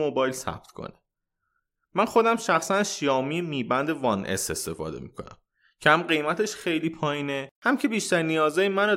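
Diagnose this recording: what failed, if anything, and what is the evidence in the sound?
Nothing failed in this recording, and the sound gives no evidence of a fault at any stage.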